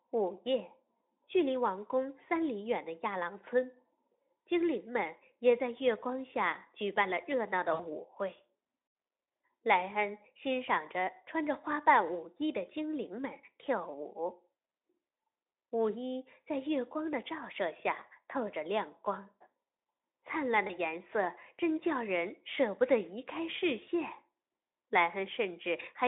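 Speech carried over a narrowband Speex link shows VoIP packet loss concealed by the speech codec at 7.73–7.82 s and 20.67–20.73 s, gaps matching about three lost 20 ms frames and then one. Unlike a hard dropout, the gaps are filled in: the decoder extrapolates from the last pitch and filter with fading gain, and the voice stays weak briefly afterward.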